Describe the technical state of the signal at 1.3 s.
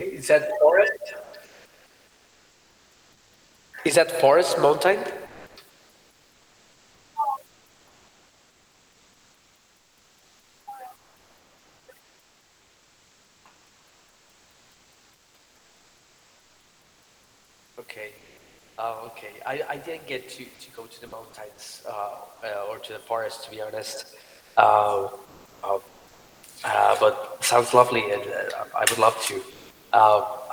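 At 1.3 s the sender's voice detector has likely mistaken the tail of the speech for background and stopped transmitting, so about 90 ms of real sound is lost between 1.23 and 1.33 s. This is sound dropped by the voice detector, and the audio cuts abruptly to steady noise instead of finishing naturally.

That same pause triggers comfort noise in place of the background from 1.23 to 3.73 s. With transmission halted, the receiver synthesises a rough imitation of the room noise, a pattern that fits Opus DTX. The real, detailed background is replaced by a flat, featureless hiss for about 2.4 s until sending resumes.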